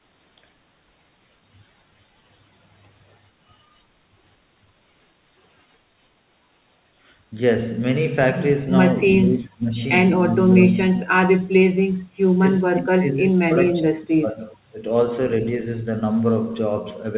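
From 9.16 to 9.94 s, 10.33 to 11.48 s, 12.38 to 12.45 s and 12.64 to 14.79 s, the speech drops sharply, by up to about 35 dB. This is likely speech suppressed in double talk.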